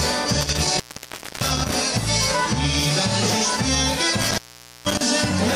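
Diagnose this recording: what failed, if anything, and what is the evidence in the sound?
Intermittent contact in the analogue wiring: between 0.41 and 1.77 s and again between 4.21 and 5.01 s, the sound cuts out for about 0.62 s and 0.47 s, with crackle at each break and faint hiss underneath. That hiss and scratchy edging mark a loose cable or plug rather than digital dropouts, which fall to clean silence.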